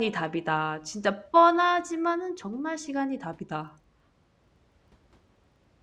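Speech, and from 3.6 s to the end a filter restarted on every block puts a 25 Hz buzz on it, the filter starting each 40 ms block from silence.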